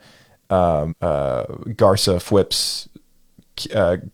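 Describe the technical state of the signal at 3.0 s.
At 3.0 s the speech signal is intact, with no audible technical fault at that moment.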